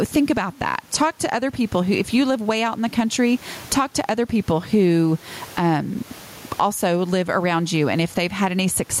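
A speech recording with gain pumping throughout, a gain swing of around 20 dB, with room noise about 36 dB below the speech. The likely cause is input gain set far too high, with a fast limiter clamping each peak and squashing the dynamics.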